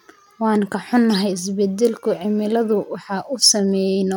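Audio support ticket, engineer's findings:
Listened to the speech clip a couple of times and found nothing wrong, so nothing to log here.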